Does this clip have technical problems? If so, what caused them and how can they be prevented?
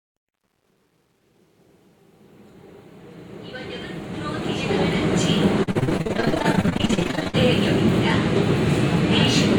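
Yes. Truncation distortion on a fade runs from 0.0 to 5.08 s, during the fade-in that rises smoothly from near silence to full level at 5.08 s. The gain stage is rounding the signal to too few bits without dither, which fits roughly 10-bit resolution. At the lowest levels the waveform collapses into a few square steps, so from 0.0 to 3.35 s the sound is gritty. To prevent it, run fades at higher internal resolution and add dither before reducing word length.

Repeated packet loss (robotic sound) occupies 5.63 to 7.35 s. Dozens of short holes, the longest 57 ms, arrive in quick succession, and each one is patched by extending the preceding sound before the next hole appears. About half of that stretch is concealed material: roughly 840 ms is filled, and about 860 ms of the original sound is missing. The result is choppy sound with pieces gone. To prevent it, use a more reliable network path with a larger jitter buffer and forward error correction.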